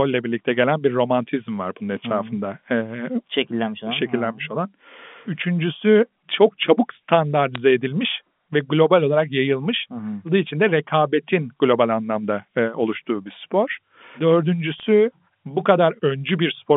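Bit errors on a digital phone line flip individual bits in the 8-bit telephone samples, so each wrong bit corrupts a single sample, and errors on the sign or upper bits jump it far from its true value. The result is sharp ticks and brief crackle laid over otherwise unchanged speech, here from 7.55 to 7.58 s, just before "edilmiş ve global olarak", and again from 14.78 to 14.83 s. Both bursts point to a low error rate, around a fraction of a percent.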